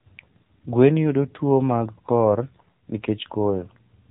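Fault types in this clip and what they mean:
AMR narrowband mobile codec: a buzzy, synthetic-sounding voice with nothing above 4 kHz, from a low-rate mobile codec that fits about 7.4 kbps modelling the vocal tract.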